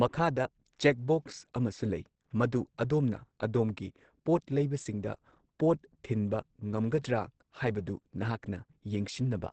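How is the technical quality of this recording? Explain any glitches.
Plainly audible codec damage runs through the whole recording. From start to finish the speech sounds muffled and hoarse, with nothing above about 8.4 kHz. This is likely Opus compression. At a bitrate that sounds as low as roughly 16 kbps, the encoder has dropped into its speech-oriented SILK mode. That mode models the voice in a wideband range and discards everything higher, so the top end is lost and the remaining tone takes on a dull, rough quality.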